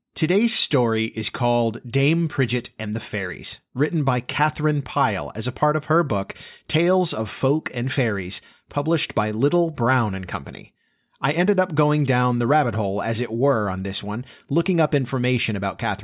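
Speech recording with no audible technical faults: no dropouts, clicks, clipping, or timing or pitch problems anywhere in the clip.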